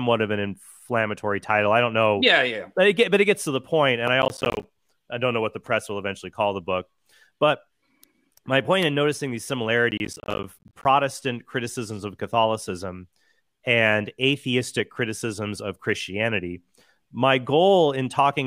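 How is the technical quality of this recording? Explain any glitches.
Two bursts of processor overload crackle mar the recording, at 4.22 to 4.64 s and 9.91 to 10.85 s. The processor repeatedly missed buffer deadlines, leaving many tiny hard-edged silent gaps, which fits buffers of about 10 ms. Unlike one dropout, this is gritty tearing that stops when the load passes.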